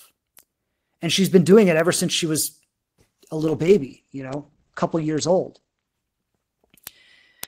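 At 3.38 s a call bitrate drop sets in and lasts until 5.94 s. The bandwidth estimate fell and the encoder was pushed to spend far fewer bits, consistent with a fall from about 32 kbps to roughly 13 kbps. The speech turns muffled and watery as the top end goes. On a spectrogram, energy above 8 kHz vanishes abruptly where it had reached 20 kHz, leaving a flat ceiling for about two and a half seconds before the full band returns.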